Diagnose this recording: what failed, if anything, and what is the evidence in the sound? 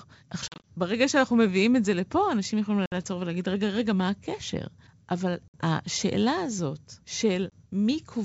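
Hard-edged holes of silence cut into the speech at 0.49–0.71 s (about 100 ms missing in short gaps scattered over 160 ms, the longest 40 ms), at 2.86–2.94 s and 5.48–5.55 s (60 ms each), and at 7.50–7.55 s (20 ms). After each hole the speech returns slightly distorted, then settles. The failure is in the network: packet loss on an ADPCM call. The gap sizes suggest a handful of packets in the first burst, about three at 2.86 s and 5.48 s, and about one at 7.50 s. Missing packets were replaced with silence, so the receiving G.722 decoder's adaptive predictor and step size fell out of step with the sender's and needed a few tens of milliseconds to recover. The wideband coding itself, running at 64 kbit/s, keeps the speech clear up to 7 kHz.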